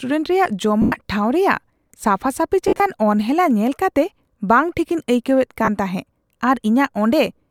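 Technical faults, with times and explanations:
0.82–0.92 s, 2.68–2.80 s (just before "ᱚᱱᱦᱮᱞᱟ ᱧᱮᱞ ᱠᱟᱛᱮ"), 5.65–5.68 s, lost LE Audio frames: brief noisy smears replace the speech for 100 ms, 90 ms (scattered, longest gap about 50 ms) and 30 ms. The LC3 decoder concealed the missing frames by repeating the last spectrum with random signs.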